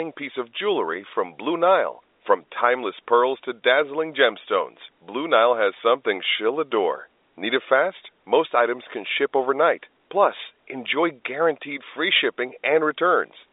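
Nothing is technically wrong with this speech clip, which carries the narrow, band-limited sound of a G.711 telephone line.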